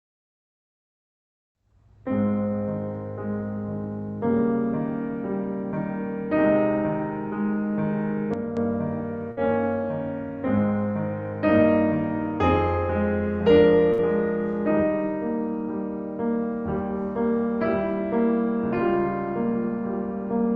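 At 8.34 s the music suddenly drops by about 8 dB, with the background falling right along with it, and stays down until 8.57 s. That's a sudden gain jump. There's no ramp at all, so the likely cause is a gain setting being applied in one step rather than faded in.

Then there are two bursts of packet loss, at 9.31 to 9.40 s and 13.93 to 14.01 s. In each, the receiver stretches the last bit of music for roughly 55 ms, letting it sag into a held, fading tone. When playback picks up again, about 60 ms of the music has simply been skipped. Throughout, the call codec's band limit sits around 8 kHz.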